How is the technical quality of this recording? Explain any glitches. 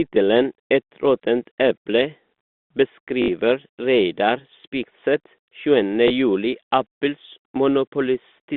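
A brief robotic stutter and a small blip break up the speech, heard through the narrow band of a telephone line. Both are packet loss with last packet repeated. At 3.22 to 3.28 s a 60 ms buzz, consistent with three 20 ms packets replayed, repeats at about 50 Hz. At 6.08 to 6.10 s a single 20 ms repeat gives a small blip.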